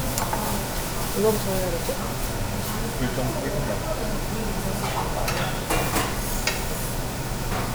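The clip is a recording of sounds, and nothing is technically wrong with it.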